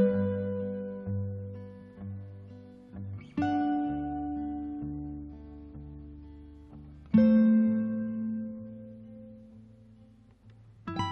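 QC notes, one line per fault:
No technical faults are audible anywhere in this audio; the signal holds steady and continuous, with no breaks, level disturbances or added noise.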